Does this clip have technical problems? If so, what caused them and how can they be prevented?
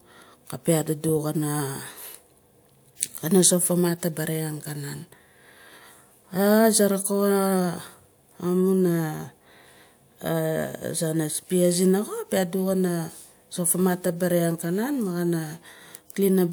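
No, the speech signal shows no technical faults that call for a cause or a preventive step.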